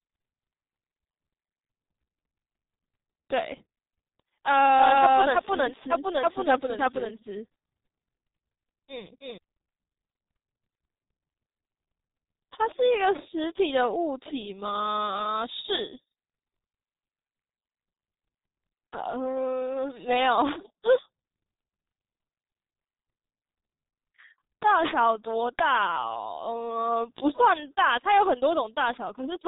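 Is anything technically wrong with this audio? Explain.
Yes. G.723.1 codec, throughout: heavy low-bitrate coding, consistent with about 6.3 kbit/s, removes everything above 3.8 kHz, leaving the speech muffled and hoarse with smeared consonants.

Doubled audio track, 4.78 to 9.38 s: a second full-band copy, about equally loud, trails by roughly 300 ms, likely from a slower capture path. It starts and stops abruptly.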